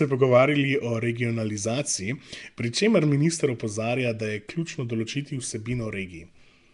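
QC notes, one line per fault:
Throughout: Nellymoser compression. The speech carries a rough, hissy halo and a smeared, underwater quality, with plainly audible codec damage and nothing above 10.6 kHz. The likely cause is the Nellymoser Asao codec from Flash, at a rate that fits around 44 kbps. It codes short blocks of samples with a fixed, small bit budget. Bands too weak to earn bits are replaced with noise, which produces the grainy wash, and the block-wise coding blurs the sound over time.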